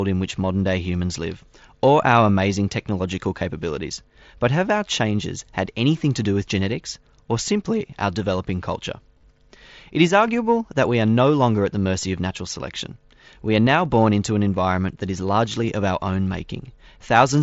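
Concealed Bluetooth headset packet loss occurs at 3.39 s after "or our amazing technological", between 9.15 and 9.23 s, at 12.01 s after "no longer at the", and at 15.53 s after "an environment that is". Each time, the receiver patched the gap by repeating recent waveform, leaving the single lost packet at 15.53 s nearly hidden in the mSBC wideband sound.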